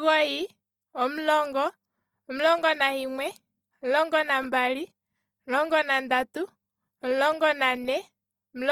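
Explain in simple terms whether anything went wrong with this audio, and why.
Something did go wrong, and it lasts the whole clip: the speech has a plainly audible grainy, rough texture. That points to Opus compression, likely in its music-oriented mode. To save data, the encoder keeps the overall loudness of each frequency band but fills in fine detail with approximations and noise. The full treble range is still present, up to about 20 kHz, so the sound isn't muffled, just coarse.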